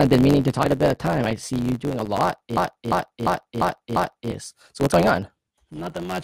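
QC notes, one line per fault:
Throughout: block size mismatch (truncated). One stage writes longer blocks than the next reads, so each block's tail is dropped. This fits a 512-sample written block. The repeated cuts make a buzz at 91.9 Hz, and the speech runs 1.07 times fast at roughly normal pitch.
0.64 s and 4.91 s: damaged data in a compressed stream. Corrupted bytes leave the decoder unable to read those frames. It loses sync and hunts for the next valid frame header, which produces a brief glitch each time.
2.57 to 4.31 s: system hang loop. The system froze while the audio hardware kept replaying its ring buffer. A 371.52 ms slice, consistent with a 16384-sample buffer, repeats 5 times at 2.69 Hz as a machine-gun stutter, and about two seconds of speech are lost.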